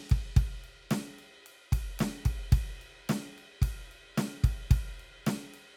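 Nothing in this bit of music stands out as a technical fault, so there's nothing here to flag.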